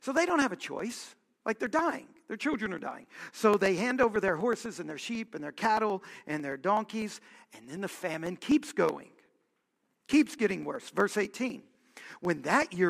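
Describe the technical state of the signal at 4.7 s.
At 4.7 s the speech carries a steady ticking, a click every 0.125 s (eight per second) that is heard only while there is signal. These are periodic USB or driver dropouts, running from 0.17 s to 12.75 s. At that fixed interval something stalls the audio path, and a tiny slice of audio, around half a millisecond, is skipped outright. The waveform jumps across each gap, and each jump produces a tick.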